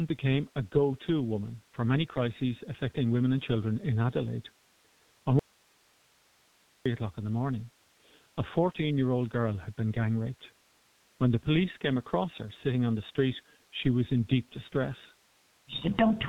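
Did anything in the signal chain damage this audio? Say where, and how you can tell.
Yes. The codec stage has degraded the whole recording. The speech is muffled and hoarse, with smeared consonants, which fits a G.723.1 codec running at around 6 kbit/s. On a spectrogram, energy stops abruptly at 3.8 kHz, and the harmonics look coarse and blocky because the low-rate coder refreshes its voice model only every 30 ms frame. The damage is heavy and constant from start to finish.

There is also an audio dropout to a faint residue from 5.39 to 6.86 s, a loss of about 1.46 s. The speech cuts off suddenly, and only hiss remains, roughly 35 dB below the signal, before the sound returns just as abruptly. The waveform shows a flat, low band of noise with sharp edges on both sides, not a taper. The likely cause is a break in the signal feed upstream while the later input stage stayed live.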